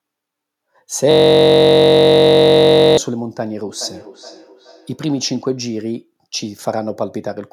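From 1.11 to 2.98 s a system hang loop froze the driver while the hardware replayed one 21.33 ms chunk, consistent with a 1024-sample buffer, producing a steady 46.9 Hz buzz. From 3.66 to 5.38 s, feedback echo between two devices lets one microphone recapture another's playback, so speech returns roughly every 0.4 s, thin and ringing, at about -20 dB.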